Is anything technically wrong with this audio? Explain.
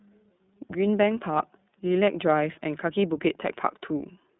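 Yes. Throughout the clip the speech sounds thin, slightly rough and synthetic, with nothing above about 3.8 kHz. That is the iLBC codec: each 30 ms frame's excitation is coded independently on a narrow 150 Hz to 3.7 kHz line, consistent with its 13.33 kbps mode.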